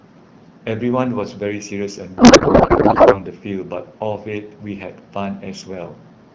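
A speech clip over an AMR wideband link, and from 2.17 to 3.22 s there's a codec payload misread: octet-aligned frames get unpacked as bandwidth-efficient, so the fields land in the wrong places and the speech turns into garbled, warbly noise.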